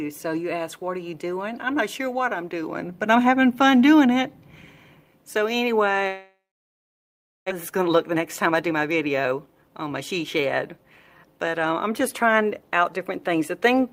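From 6.07 to 7.52 s the audio cuts out in what is likely a long network dropout: no packets reach the receiver, so it stretches the last sound into a fading buzz for roughly a third of a second, then leaves about 1.09 s of silence. When sound returns, about a second of material is simply gone. On a waveform this shows as a decaying tail collapsing to a flat line. A spectrogram shows smeared, repetitive harmonics fading into an empty band.

Right after the gap, from 7.54 to 9.90 s, a jitter buffer speed-up follows. The delayed audio has piled up in the buffer, and the receiver sheds it by cutting out short pitch-period chunks again and again. Playback runs at 113% speed with pitch unchanged, dropping roughly 0.3 s in total, so the sound feels rushed. Two milder bursts follow: 10.39 to 10.85 s at 107% and 11.25 to 11.66 s at 108%, each trimming a few hundredths of a second. On a spectrogram these stretches look horizontally compressed, with events packed closer in time while harmonic spacing stays the same. 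The waveform shows tiny splice points where cycles were removed.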